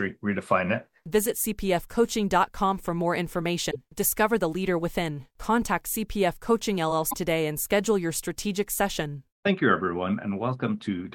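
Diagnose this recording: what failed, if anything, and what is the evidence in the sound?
Broken MP3 bit reservoir at 3.70–3.76 s and 7.09–7.15 s: speech jumps ahead with a roughly two-frame (26.1 ms frames, about 57 ms) disturbance, likely because dropped codec frames left successors decoding borrowed bytes from the wrong frame.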